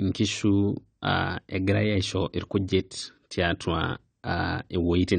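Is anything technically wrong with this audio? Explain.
Yes. Throughout the speech, the sound is dull and smeared, with nothing above 9 kHz and a warbling, fizzy texture on sustained sounds and sibilants. This is likely AAC compression: AAC-LC at a rate that fits around 32 kbps discards high frequencies and coarsely quantises what remains.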